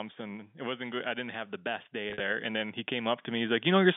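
From 1.91 s, just after "didn't have the best", automatic gain rising lifts the level by about 10 dB through to 3.95 s. Unlike a compressor pumping, the speech and the background noise swell together, slowly and steadily, rather than dipping on loud syllables.

Between 2.1 and 2.2 s, packet loss with pitch repetition removes 80 ms of audio, scattered across 100 ms, with the longest run 50 ms, which fits roughly 10 ms packets. Each gap is bridged by a repeated pitch period, heard as a brief buzzy hold that fades, not the clean silent clicks of plain dropouts. The narrow 250 Hz to 3.6 kHz telephone band of the G.711 coding is audible throughout.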